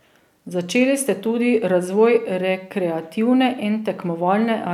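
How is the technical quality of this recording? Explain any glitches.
No glitches can be heard anywhere in this speech recording. There is nothing in it that calls for an explanation.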